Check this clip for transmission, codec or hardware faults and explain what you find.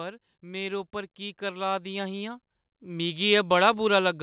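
There's one real fault here, an automatic gain rise. From 0.41 s to 3.51 s the level climbs by about 11 dB, as the gain control decides the input is too quiet and keeps turning it up. The speech and the background noise swell together over those three seconds, rather than the talker actually getting louder. The band-limiting, with nothing above 4 kHz, comes from the call codec (it sounds consistent with G.711 mu-law) and isn't a fault.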